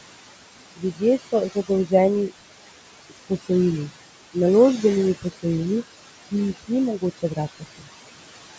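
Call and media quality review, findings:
Noise suppressor artifacts, whole clip. The room noise sits about 10 dB under the speech, and the suppressor pulls it down by about 21 dB in the gaps, then lets it back up under the speech, so the background pumps in and out. That's per-band gain from the suppressor tracking its noise estimate frame by frame.

Speech cut by the noise suppressor, 0.77 to 1.02 s, 3.1 to 3.5 s, 6.98 to 7.39 s and 7.55 to 7.88 s. Bits of speech get dragged down along with the background, by about 16, 21, 19 and 20 dB at the worst. Roughly 150 to 200 ms is affected in each window. The affected speech sounds swallowed or faded. The suppressor is misclassifying quiet speech as noise and ducking it.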